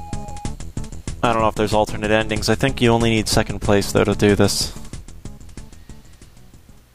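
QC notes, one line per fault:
0.56–6.94 s, clock slip clicks: two devices in the chain are likely running on separate, unsynchronised clocks drifting apart by something like 40 ppm, so each time the gap grows to a whole sample, one sample is dropped or repeated. The resulting discontinuity shows up as a faint, regular tick roughly every half second, around ten in all. The ticks stand out most on loud or sustained high-frequency material and disappear in quiet passages.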